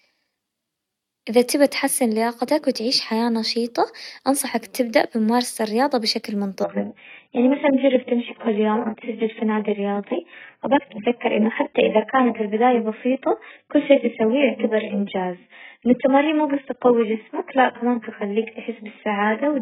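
At 6.64 s, right after "تبدأ بممارسة الرياضة بشكل", the adaptive stream switches to a lower bitrate and stays there to the end. Everything above 3.7 kHz vanishes, and the speech turns dull and swirly, which fits a drop from roughly 96 to 8 kbit/s AAC. Unlike a buffering stall, the quality changes instantly with no gap.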